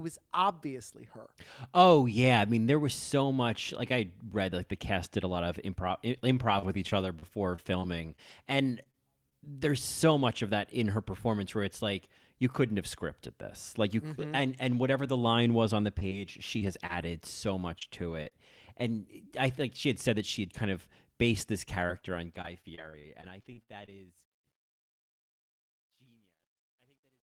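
Scattered short gaps occur from 5.35 to 9.33 s and again from 15.99 to 18.33 s. Packets went missing one at a time, roughly ten in the first stretch and about seven in the second, none longer than about 30 ms. The receiver bridged each hole by extending the sound just before it, which leaves brief ticks, smears and hiccups in the speech.

Truncation distortion on a fade runs from 21.70 s to the end of the clip at 27.24 s, riding on the fade-out. The volume stage keeps too few bits and adds no dither, which fits roughly 12-bit resolution, so the shrinking waveform collapses into coarse square steps. From 24.38 s the quiet tail turns gritty.

Repeated packet loss (robotic sound) affects 21.87 to 23.89 s, overlapping the start of that fade. The dropouts come in quick succession, which points to about a dozen lost packets, with gaps up to 45 ms and 318 ms of sound filled in, about 16 percent of the span. 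Each patch barely ends before the next hole arrives, so the speech becomes choppy, with pieces missing.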